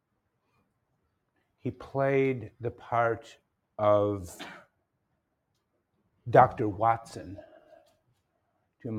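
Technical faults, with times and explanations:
7.6 to 8.2 s: sound cut by the noise suppressor. The suppressor mistook this sound for noise and pulled it down, by about 18 dB at worst.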